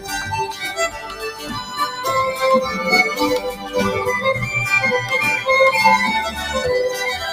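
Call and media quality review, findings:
Noise suppressor applied to music or sounds, whole clip: level pumps and thins with a swing of around 10 dB. A speech-tuned suppressor is reading steady tones and tails as noise. Unlike AGC, onsets pass intact while sustained parts sink.

Sound cut by the noise suppressor, 0.89 to 1.78 s (roughly 0.7 s affected) and 3.47 to 3.75 s (roughly 0.3 s): the suppressor classed these passages as noise, pulling them down by up to about 9 dB. A dropout would leave gaps, but here the sound remains audible.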